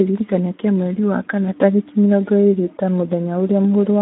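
Right through, the speech carries Speex codec damage, hoarse and noisy from a starved excitation at what sounds like about 11 kbps, squeezed into a 200 Hz to 3.4 kHz band with nothing above 3.7 kHz.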